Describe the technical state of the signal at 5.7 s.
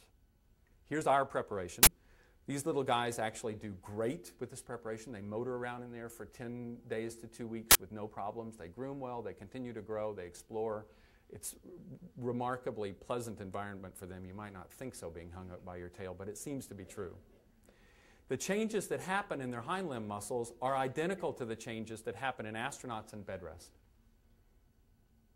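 At 5.7 s the signal is intact, with no audible fault at that point.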